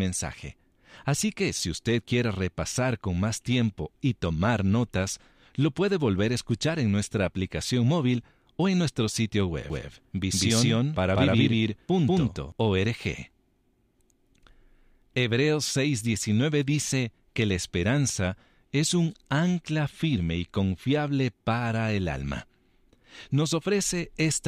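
From 9.7 s to 12.52 s the speech turns into a stuttering, overlapped double, with every syllable repeated a fifth of a second or so later at about the same loudness, then snapping back to a single clean track. That is a doubled audio track: a second full-band copy rides a fixed delay behind the original with no reverb tail or room colour, and starts and stops abruptly. The likely cause is the signal being captured twice, once through a slower path.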